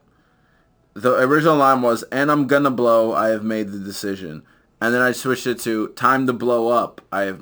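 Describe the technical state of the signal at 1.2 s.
At 1.2 s the speech carries imaging from sample-and-hold upsampling, present for the whole clip rather than just this moment. The sound points to a source near 24 kHz raised to 44.1 kHz by holding each sample, with no smoothing filter. That leaves a mirrored copy of the speech spectrum folded into the 12 to 24 kHz band, about 24 dB below the speech. It is heard as a bright metallic fizz that rises and falls with the speech.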